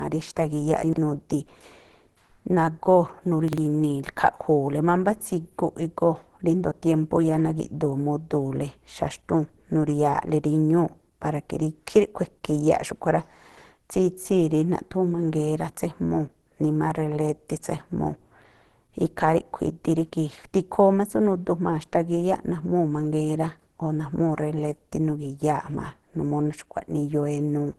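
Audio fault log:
throughout, low-bitrate audio saved at a high bitrate: The sound is dull and smeared, with nothing above 12.2 kHz. The likely cause is a low-rate encode, fitting Opus near 16 kbit/s, later resaved as high-rate MP3, which cannot restore what was lost.
0.84–0.98 s and 3.48–3.58 s, chunks out of order: Each moment sounds briefly jumbled. A slice about 46 ms long plays after the audio that should follow it, which fits a chunk landing two places late and then one place late.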